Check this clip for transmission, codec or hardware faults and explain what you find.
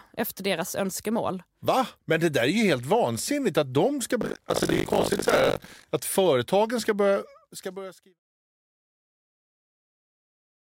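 One hardware-path fault is present. Buffer tearing, 4.2 to 5.85 s: writer and reader have slipped, so about two-fifths of each period replays speech roughly 70 ms old, giving a 50 Hz robotic rattle. The fade-out ending near 8.2 s is gentle and clean.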